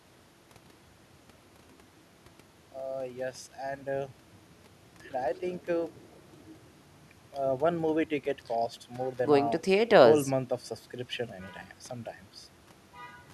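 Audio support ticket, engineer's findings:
Engineer's findings: no audible fault found in this speech recording.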